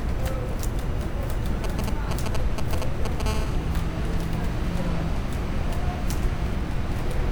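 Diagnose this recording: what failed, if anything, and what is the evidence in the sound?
GSM signalling bursts, 1.64 to 3.22 s: galloping ticks and short 217 Hz buzzes, nearly as loud as the sound. Analogue wiring is rectifying a nearby phone's radio bursts.

GSM phone buzz, 3.26 to 6.51 s: a steady, raspy 217 Hz buzz, about 19 dB below the sound. The same analogue path is demodulating a phone's call transmission.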